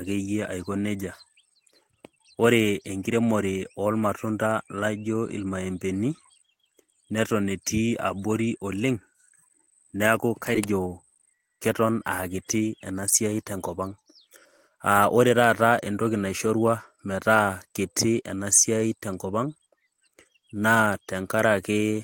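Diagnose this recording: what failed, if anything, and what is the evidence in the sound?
At 10.55 to 10.57 s the speech jumps forward with no gap and no fill. Around 0.7 s of material is missing, and the two sides are butted together almost directly. This is a skip ahead at the network and jitter-buffer stage. A run of audio was discarded while later packets were already queued, so playback resumed further along. That cut the built-up delay by about the same amount as the lost stretch.

From 10.65 to 11.83 s the speech sounds rushed, running at about 108% of normal pace while the pitch stays unchanged. This is jitter buffer speed-up, also at the buffer stage. The receiver was still holding more audio than its target, so it repeatedly trimmed short pitch-period-length slices to catch up. In total roughly a tenth of a second was removed, which tightens the rhythm without any audible jump.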